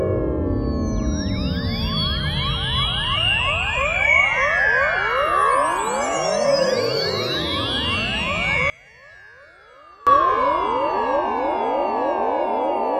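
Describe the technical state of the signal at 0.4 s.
At 0.4 s the signal is intact, with no audible fault at that moment.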